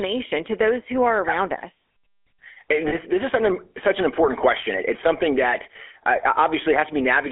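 Speech with a buzzy, gravelly roughness and a narrow 300 Hz to 3.4 kHz band throughout, the sound of the GSM full-rate codec, whose pulse-driven vocal-tract model fits 13 kbps coding. From 2.88 to 2.94 s a brief metallic ring holds the sound for 40 ms, consistent with two lost GSM frames concealed by repeating the last good frame.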